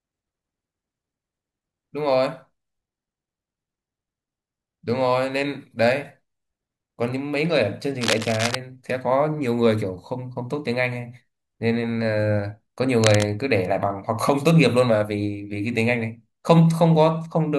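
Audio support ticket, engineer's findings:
Cable scratch noise in speech, 8.01–8.55 s and 12.98–13.25 s: dense, uneven scratchy bursts about 5 dB below the signal. Likely a worn connector or cable shifting, contact resistance fluctuating. Spectrogram: ragged broadband smears; waveform: jagged spiky fuzz riding on the speech.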